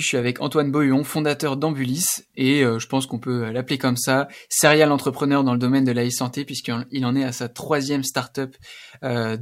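No technical faults are audible anywhere in the speech recording.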